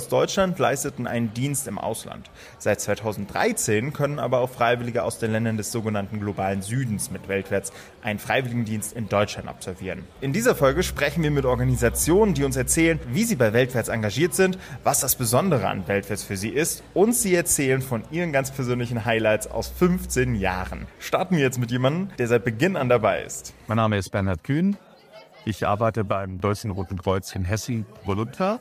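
A gain setting was most likely applied in a single step with no ramp, so the digital level dropped from one sample to the next: a sudden gain jump at 26.12 s. The sound falls by about 6 dB at once, and the background noise drops with it, which gives away a change of level rather than a quieter source. It stays at the lower level until 26.4 s, roughly a quarter of a second.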